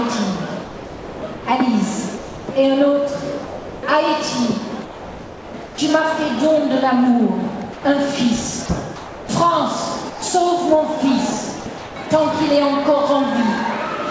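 Sound chopped by the voice detector, 0.65 to 1.46 s: the sender's detector likely toggled between sending and pausing, so about 690 ms of quiet edges became synthetic comfort noise. The sound stutters.

Sound dropped by the voice detector, 2.18 to 2.48 s and 3.47 to 3.83 s: the detector likely mistook quiet sound for background and stopped transmitting. Steady comfort noise fills 300 ms and 360 ms before the sound resumes.

Sound chopped by the voice detector, 4.85 to 5.78 s: the same on-off switching likely replaces about 810 ms in fragments, giving a broken texture.

Sound dropped by the voice detector, 7.73 to 7.85 s: a 120 ms gap gives way to flat noise.

Sound chopped by the voice detector, 8.66 to 9.29 s: about 360 ms are swapped for comfort noise in pieces, so the sound breaks up.

Sound dropped by the voice detector, 10.10 to 10.22 s: another 120 ms dropout filled with steady noise.

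Sound chopped by the voice detector, 11.60 to 11.96 s: about 240 ms are chopped up and replaced by comfort noise. Throughout, the G.722 call path leaves nothing above 8 kHz.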